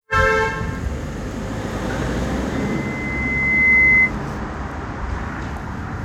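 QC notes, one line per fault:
2.53–4.13 s, loudspeaker feedback squeal: a pure tone at 2 kHz swells over roughly a second until it sits about 10 dB above the sound, then stops. A microphone was hearing its own loudspeaker, and at 2 kHz the loop gain exceeded one, so that frequency kept reinforcing itself. On a spectrogram, a single thin horizontal line at 2 kHz brightens steadily and ends abruptly at 4.13 s. The waveform envelope balloons into a dense, even band.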